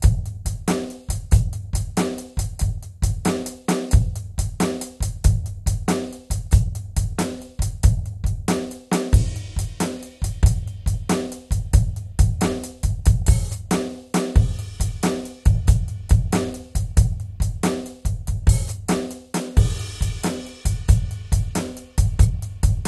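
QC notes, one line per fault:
Throughout: MP2 compression. The music sounds dull and gurgling, with a granular roughness and plainly audible damage. The likely cause is MPEG Layer II coding short of bits, which fits a rate around 64 kbps: upper sub-bands drop out entirely, leaving nothing above 12.1 kHz, while the surviving bands are coarsely quantised. On a spectrogram there is a hard ceiling at 12.1 kHz, with blocky patches flickering on and off below it.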